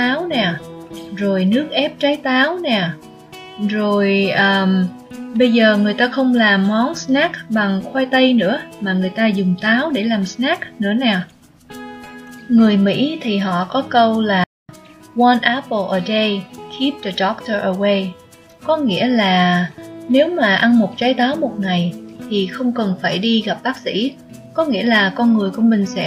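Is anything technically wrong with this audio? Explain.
Yes. At 14.44 s there is a playback stall lasting about 250 ms, until 14.69 s. The sound cuts out mid-flow into silence, then resumes. The player likely ran short of data or had its thread blocked, so output halted until it recovered.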